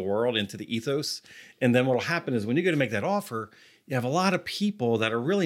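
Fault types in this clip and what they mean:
CD scratch ticks: a disc blemish corrupts more data than error correction can rebuild, once per revolution, so the player conceals those samples. Three ticks, each well under a millisecond, occur between 3.83 and 4.34 s, just after "to make that offer".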